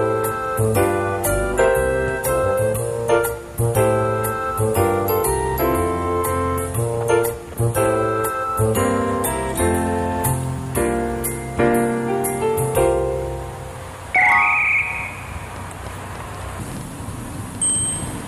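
From 15.56 s to 18.21 s a train of clicks runs over the sound, roughly fifteen pulses at an uneven spacing averaging 5.3 per second. Each click has much the same shape and peaks at around the level of the surrounding audio, so they register as a distinct popping tick that continues through any pauses. The repeated similar pulses point to an external source, likely electrical interference from nearby equipment or an intermittent connection or power supply.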